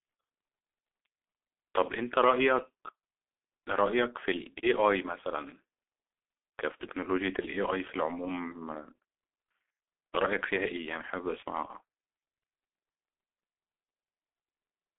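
Heavy G.723.1 codec damage runs throughout. Nothing passes above 3.8 kHz. Coarse, slow coding, which fits about 6 kbit/s, leaves speech muffled and hoarse, with smeared consonants.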